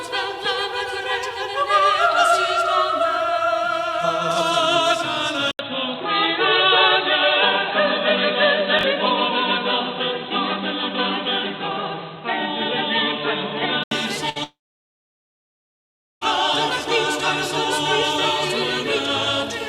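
The audio changes character abruptly at 5.51 s. There is a short gap of about 80 ms, and then the sound turns dull and boxy. Nothing remains above 4.1 kHz, and a new, fairly quiet background noise appears. The level stays about the same. This is an input switched to a poorer device, likely a fallback microphone or a headset call profile with a narrow band. The full tone returns at 13.91 s. Inside that stretch, from 8.79 to 8.83 s, there is a brief jumbled moment. These are chunks out of order. One block of about 21.33 ms played one slot late. No audio is lost there. The sequence is simply wrong, so there are three hard joins where the pieces meet. At 14.29 s a burst of packet loss cuts in. About 60 ms of audio is missing. The receiver carries the last sound forward and fades it, so it is heard as a short held buzz or hiss. The audio then jumps ahead at 14.38 s, with the middle gone. Only a moment later, at 14.44 s, a long network dropout begins. 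The last sound is stretched and faded again for roughly a tenth of a second. After that there is near silence for about 1.67 s. Sound resumes at 16.23 s, and about 1.78 s of material never plays. The likely cause is the stream stalling entirely, with no packets arriving for that whole stretch.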